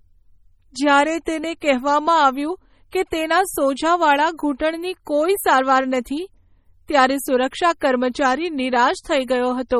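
Throughout the speech, the sound is heavily watery and swirly, with metallic chirps on s sounds, smeared attacks and nothing above 18.9 kHz. The likely cause is MP3 compression at a bitrate around 32 kbps, too few bits, so weak frequency lines flicker on and off between frames.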